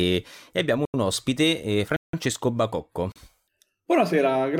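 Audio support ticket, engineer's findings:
Hard dropouts to digital silence: 0.85–0.94 s (between "e abbiamo" and "un ospite eh"), 1.96–2.13 s (after "abbiamo un ospite eh"), and 3.12–3.16 s. These are blocks of digital silence, likely from an output buffer not filled in time; the first two gap lengths fit 4096- and 8192-sample buffers.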